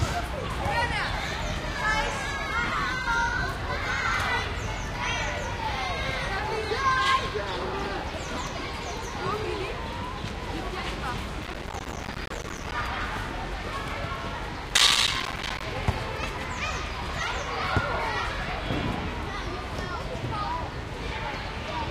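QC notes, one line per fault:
11.43–12.72 s and 14.69–15.63 s, processor overload crackle: the processor keeps missing its buffer deadlines, and each late buffer drops out as a hard-edged gap of around 5 ms. Dense runs of these tiny silences break the sound up into crackle, longer in the first burst.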